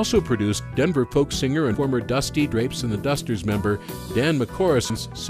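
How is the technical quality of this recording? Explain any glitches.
Two glitches stand out, both compressed frames skipped: one from 1.65 to 1.74 s, another from 4.90 to 5.09 s. At each, the decoder drops whole frames it either never received or rejected as corrupt, so playback leaps forward by roughly a tenth of a second of audio, with the sound briefly jumping ahead.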